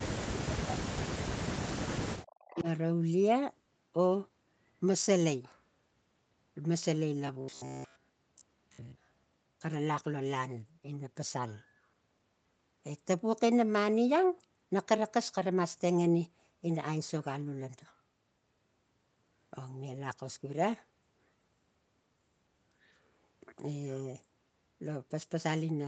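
From the start to 1.88 s the talker drops away, sometimes by about 40 dB, likely speech suppressed in double talk, with the canceller ducking everything while both sides spoke. At 2.2 to 2.63 s there's an echo leak: a faint copy of the voice, about 20 dB down and 378 ms late, likely slipping past the canceller. Right at its tail, 2.51 to 2.67 s, the speech dips again by roughly 20 dB in another brief, likely double-talk squeeze. From 7.27 to 9.64 s the audio turns into a rigid metallic buzz around 66.8 Hz, robotic sound from repeated short buffers. Most of that stretch is re-played snippets of about 15 ms, likely filling gaps where fresh audio didn't arrive in time.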